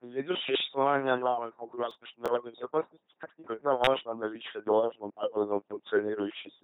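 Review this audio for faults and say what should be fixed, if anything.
The whole clip has gone through an LPC-10 vocoder at 2.4 kbit/s, and the damage is heavy. Every moment gets forced into either pulse-driven buzz or noise-driven hiss through a small all-pole filter, so the speech sounds robotic, with nothing above 3.9 kHz. Use the original recording or a modern wideband codec instead.

There's a burst of processor overload crackle from 1.91 to 2.28 s, right after "существования новых" and before "безопасности как никогда важно". Several short buffers, each a few milliseconds long, missed their deadline and were skipped outright, leaving hard-edged gaps that add up to gritty tearing. Give the audio thread more headroom or use a larger buffer so it isn't starved.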